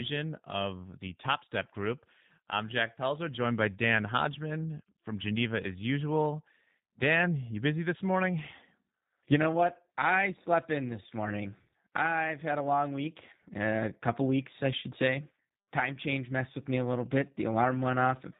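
From start to finish the speech carries plainly audible G.729 codec damage. The codec rebuilds each short frame from a vocal tract filter, a pitch estimate and a few pulses, so nothing survives above 4 kHz, and voiced sounds take on a rough, buzzy, slightly synthetic texture consistent with G.729A at 8 kbit/s. A simple 4 kHz low-pass would dull the speech without that grainy, reconstructed quality, which is what separates this from plain band-limiting.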